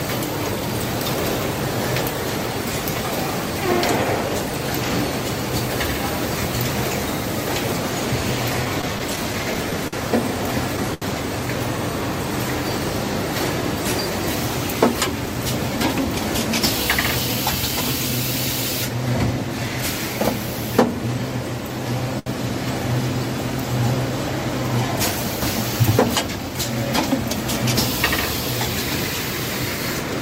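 From 8.65 to 11.05 s there's a stretch of repeated stalls, a proper stutter. Packets kept turning up late, so the jitter buffer kept running dry, around ten times in that window. Each time the receiver held the last bit of sound going until data arrived, about 0.2 s of fill altogether, with the longest hold around 76 ms. Nothing actually goes missing, but the audio drags and hiccups its way through.

At 18.89 to 19.70 s you get a jitter buffer speed-up. The buffer had built up more audio than it wants, so the receiver trimmed out tiny pitch-period-sized slivers, one after another, shaving off roughly 40 ms. Playback runs at about 104% with the pitch unchanged. The same thing happens again at 26.28 to 26.57 s, this time at about 111% over a shorter span, again dropping roughly 40 ms, so the rush is more noticeable there.

In between, at 22.19 to 22.29 s, there's a short stall from a late packet. 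One packet wasn't there on time, the buffer emptied, and the receiver stretched the last sound for 72 ms until it showed up, then carried on from the same spot. Nothing's lost, but that moment hangs on a little too long, with a faint buzzy or sagging quality to it.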